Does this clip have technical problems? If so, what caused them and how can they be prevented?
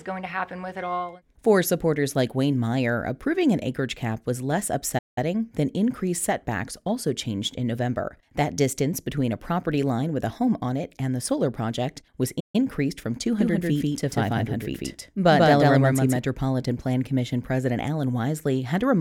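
Yes. There are two playback stalls, at 4.98 to 5.18 s and at 12.40 to 12.56 s. The sound cuts out in mid-flow for about 180 ms and then 140 ms before resuming. Each gap is likely the player running short of buffered data or its audio thread being blocked, so the output went silent until it recovered. Giving the playback path a larger buffer and keeping its thread free of blocking work would prevent these gaps.

From 13.39 to 16.17 s there is a doubled audio track. A second, full-band copy of the sound runs about 150 ms behind the original at roughly the same level. This produces a distinct slapback repeat with no reverberant tail, and it starts and stops abruptly at those boundaries. That dry, fixed offset points to the likely cause: either the same source captured again through a slower route or an edit that left two misaligned copies. Routing each source through a single capture path and checking edits for overlapping duplicate regions would prevent it.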